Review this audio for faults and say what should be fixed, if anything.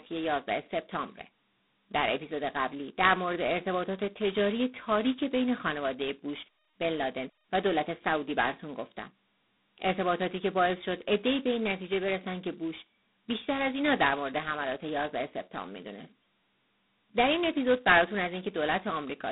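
G.726 ADPCM coding runs through the whole speech clip. Nothing passes above about 3.9 kHz, and a harsh, rasping hiss rises and falls with the speech level, which fits the coarse 16 kbit/s mode. Steady background noise would persist in the pauses. Prevent it by using 32 kbit/s or a wideband codec.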